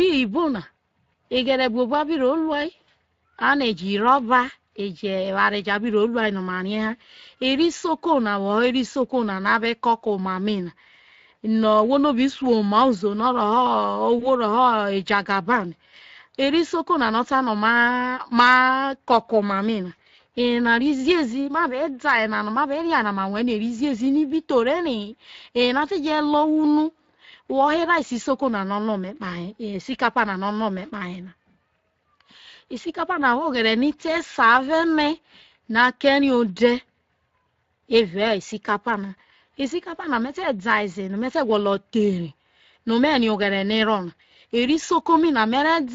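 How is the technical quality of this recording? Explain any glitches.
The recording has plainly audible coding damage throughout and one brief dropout.

Speex codec, whole clip: speech has a hoarse, noisy quality because this CELP coder has limited bits for the excitation, consistent with a setting around 20 kbps.

VoIP packet loss concealed by the speech codec, 14.19 to 14.27 s: a short smeared, fading sound. It fits one lost 20 ms frame, extrapolated from the previous pitch and filter and fading until decoding recovers.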